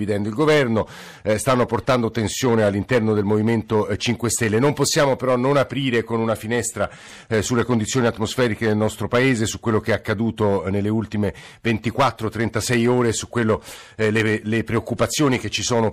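A harsh, gritty fuzz rides on every loud syllable from start to finish. This is hard clipping: the speech was driven about 10 dB past what the stage could pass, so a few percent of samples have their peaks sliced flat, spraying high harmonics.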